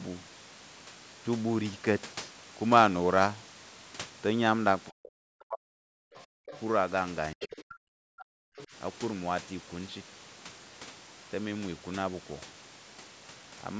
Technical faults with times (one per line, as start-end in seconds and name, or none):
4.89-6.49 speech suppressed in double talk
6.15-6.60 other side's voice leaking through
7.33-8.73 speech suppressed in double talk
7.40-7.74 other side's voice leaking through
8.18-8.24 other side's voice leaking through
8.57-8.67 other side's voice leaking through